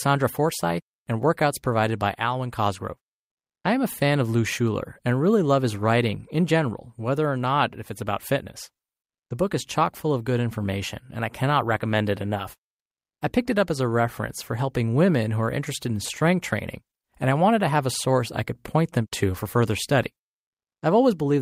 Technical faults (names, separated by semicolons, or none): comfort noise in place of the background